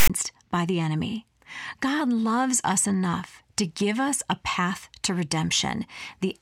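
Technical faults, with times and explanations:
0.00 to 0.10 s, file tags played as audio: the player began decoding at the very start of the file and treated the metadata block as sound, so the bytes of the text tags went out as sample values. Character codes sit in a narrow band of positive numbers, so they come out as a loud, harsh rasp pushed off-centre to one side. The zero padding that follows reads as silence, and then the speech begins.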